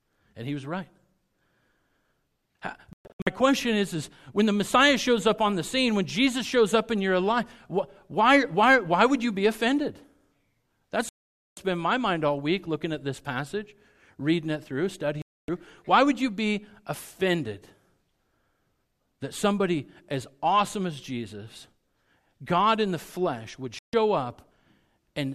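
A speech clip with digital broadcast dropout: the receiver repeatedly lost valid frames and muted, so the sound cuts out at 2.93–3.27 s (several short holes), 11.09–11.58 s, 15.22–15.49 s and 23.79–23.94 s, with what was sent in those gaps lost.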